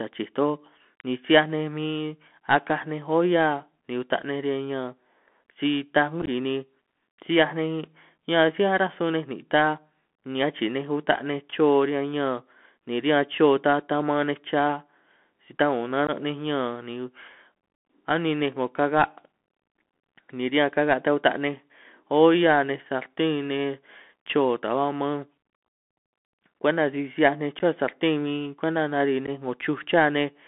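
Throughout the recording the speech has passed through the Bluetooth CVSD headset codec, a narrowband link that, by its sound, fits the 64 kbps one-bit delta coding used on headset calls. The band is squeezed to roughly 200 Hz–3.4 kHz, so nothing bright survives. Because the adaptive step can't keep pace with fast loud detail, the damage is plainly audible: sibilants come out scratchy, louder passages roughen, and a grainy hiss sits beneath everything.

Unconcealed Bluetooth headset packet loss occurs when voice packets between headset and phone go missing and nothing fills in for them. From 6.22 to 6.29 s, about 30 ms vanishes in scattered pieces over 60 ms, the longest single gap being 15 ms, and the effect is a brief crackly chop. A 15 ms hole follows at 16.07–16.10 s. Shorter dropouts of about 11 ms each land at 27.59–27.61 s, right after "'hiaj ninj", and at 29.27–29.29 s, heard as quick holes with abrupt edges.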